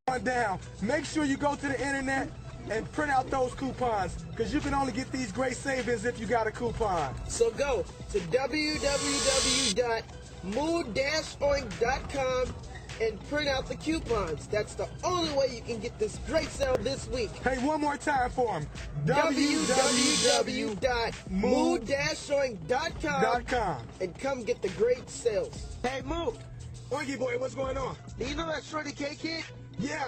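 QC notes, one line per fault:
16.16–16.75 s, processor overload crackle: a short burst of gritty, tearing crackle rides on the sound for about 0.6 s, then stops cleanly. The processor was missing its deadlines for small audio buffers, around 5 ms each, and over a dozen went unfilled. Each missed buffer was skipped outright, so the audio jumps forward with a hard edge at each miss, and those closely packed discontinuities merge into the crackle heard.
27.17 s to the end, adaptive stream at a lower bitrate: quality drops suddenly with no gap in playback. Nothing above 8.2 kHz remains, so the top end goes dull, and codec smearing and warbling become audible for the last 3 seconds or so. This fits an adaptive Opus stream stepping down from around 64 kbit/s to a much lower rung near 12 kbit/s after the connection slowed, with the encoder discarding treble to fit the reduced budget.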